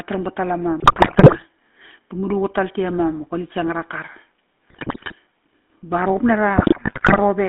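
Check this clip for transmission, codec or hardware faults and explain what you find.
The clip shows two faults: a GSM full-rate codec throughout, and three bursts of GSM bit errors.

GSM full-rate codec, the whole clip: the speech passes through a vocal-tract model driven by a sparse, regularly spaced pulse excitation that keeps only every third sample of the excitation, a scheme that fits the 13 kbps full-rate coder. The line band runs from 200 Hz to 3.5 kHz, so the voice sounds thin and narrow. Throughout, it carries a plainly audible buzzy, gravelly roughness.

GSM bit errors, 0.80 to 1.43 s, 4.70 to 5.13 s and 6.56 to 7.19 s: on a weak radio link, corrupted bits reached the decoder, which accepted wrong filter, pitch and gain values frame after frame. That warps the spectrum and throws the level around unpredictably. The density of damage points to an error rate of around 4.8 to 6 percent. 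In each burst, the voice breaks into squawks, pops and gargling before clearing.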